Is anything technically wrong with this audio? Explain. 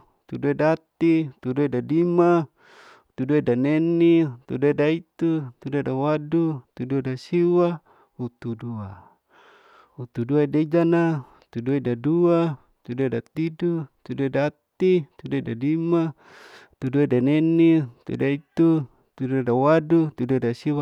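No, the signal shows no audible technical faults at any point in the recording.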